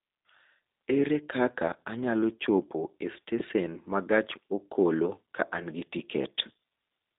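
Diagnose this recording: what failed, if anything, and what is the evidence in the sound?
The codec stage is the culprit here: the whole clip carries the sound of the G.729 codec, and it's plainly audible. There's nothing above about 3.8 kHz, and the line band sits roughly between 250 Hz and 3.7 kHz. The speech has that slightly rough, synthetic edge you get when a vocal tract filter, a pitch predictor and a handful of pulses per frame rebuild the voice, which fits an 8 kbit/s VoIP stream.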